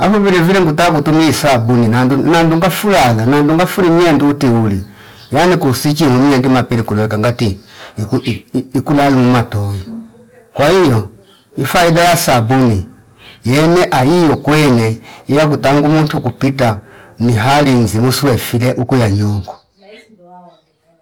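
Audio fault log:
Throughout, hard clipping: the speech was driven about 22 dB past what one stage could pass, so roughly a fifth of the waveform has its peaks sliced flat, and those squared tops spray high harmonics that turn every loud syllable into a fuzzy, distorted buzz.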